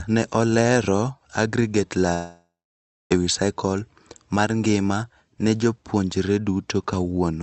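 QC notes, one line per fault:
2.13–3.13 s, long network dropout: right after "ne oleero aggregate" the last sound stretches into a buzzy hiss that fades away, leaving about 0.61 s of silence before speech returns at "ewii cycle mar ngima", with roughly a second of audio simply gone. The likely cause is a long gap in arriving packets. The receiver's concealment extended the final sound, gave up after a few tenths of a second, and the lost stretch was never played.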